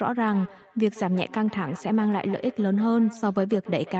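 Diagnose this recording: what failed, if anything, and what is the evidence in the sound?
Feedback echo between two devices, at the call-processing stage: from 0.31 s onward, sound repeats roughly every 150 ms, up to about 18 dB down. On a spectrogram, faint, evenly spaced copies trail each burst, because the other device's replay re-enters a microphone whose canceller doesn't cover it.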